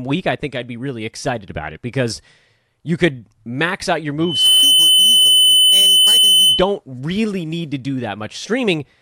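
At 4.20 s the microphone begins picking up its own loudspeaker, and the loop gain tops unity near 3 kHz, causing loudspeaker feedback squeal. A pure tone swells within about a third of a second to roughly 10 dB above the speech, screaming until 6.77 s.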